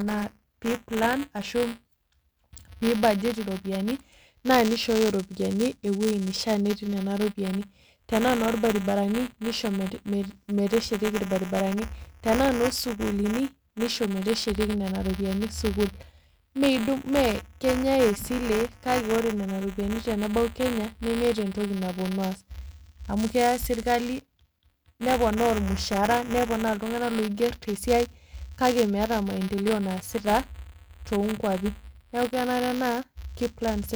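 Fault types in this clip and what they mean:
Buffer tearing: writer and reader slipped, splicing a sliver of audio roughly 15 ms old into each 5 ms period; 200 Hz rattle, regular waveform jumps, spectrogram striations.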